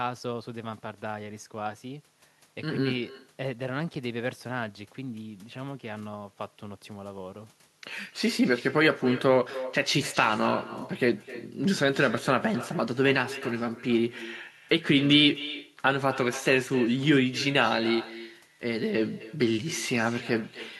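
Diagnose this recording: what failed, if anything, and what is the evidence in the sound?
Echo with no canceller, throughout, in call processing: the far-end loudspeaker's pickup returns unremoved as a quieter, thinner copy about 16 dB down, roughly 300 ms late.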